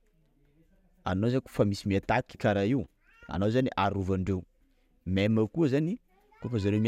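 Nothing technically wrong turns up anywhere in this short speech recording, so there's no problem to point to.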